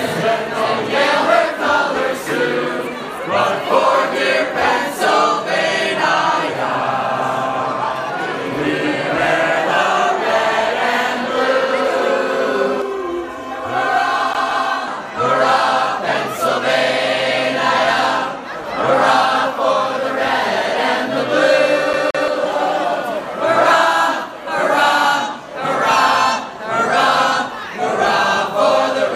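From 12.82 to 14.88 s the sound turns hollow and phasey, with a quality that stays fixed rather than sweeping. This is channel delay (comb filtering): one channel runs roughly 3 ms behind the other, and when the two are summed to mono, whatever they share cancels at evenly spaced frequencies, starting around 200 Hz and repeating up the spectrum. Those fixed notches hollow out the tone for the whole two-second stretch.

Inside that stretch, from 14.33 to 14.68 s, the audio jerks into a quick, even stutter. The same 0.17 s slice plays twice, with a brief mute at each jump. The same stutter returns from 21.93 to 22.28 s, again with a 0.17 s slice repeating twice. This is a CD stuck on one turn: a scratch knocks the laser back one track at the same point on each revolution, so the player replays a single short loop before moving on.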